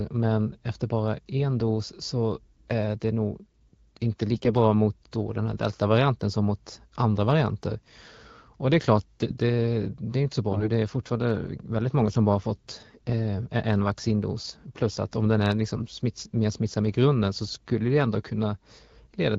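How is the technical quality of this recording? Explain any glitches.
The recording has four short bursts of AMR bit errors, at 4.34–4.52 s, 10.52–10.69 s, 12.90–13.11 s and 15.74–15.84 s. Each lasts only a few frames. Flipped low-priority bits scramble pulse positions and fine gain and spectrum values, so pitch and loudness hold while the speech turns hoarse and gargly. Lost packets instead leave gaps or muting. The harshest burst is at 10.5 s. The coding is wideband AMR at about 12.65 kbit/s.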